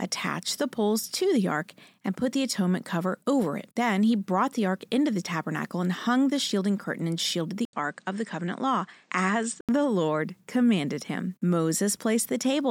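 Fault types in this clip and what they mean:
Input switched to a poorer device: an 80 ms waveform gap at 7.65 s, then spectrogram content stops above 9.1 kHz until 9.69 s, likely another microphone.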